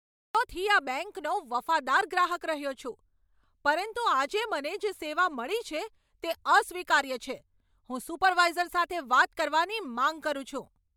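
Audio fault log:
0.00–0.35 s, cut-off start. The clip opens on digital silence. At 0.35 s the speech begins abruptly, already partway through a sound. There is no natural onset or fade-in. Capture evidently started late, so the first part of the utterance was lost.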